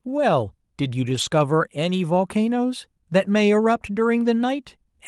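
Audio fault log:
1.09–1.23 s, lost packet rebuilt from error correction: several separate packets went missing, about 80 ms of audio, which fits four 20 ms packets. The decoder filled it from the low-bitrate copies carried in the following packets, so the speech never drops out, but it turns rougher and noisier here.
4.25–4.27 s, lost packet rebuilt from error correction: a single packet was lost and replaced from its low-bitrate copy, leaving a brief grainy patch.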